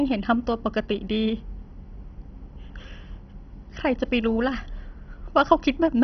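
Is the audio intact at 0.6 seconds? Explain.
No. At 0.6 seconds, as throughout the whole clip, the speech sounds muffled and dull, with a gurgling, grainy roughness clinging to it and nothing audible above about 6.1 kHz. This is likely heavy MP2 compression, with a starved bit budget that fits a rate near 32 kbps. The encoder has shut off the upper sub-bands entirely, and the bands it keeps flicker on and off and are quantised so coarsely that they bubble.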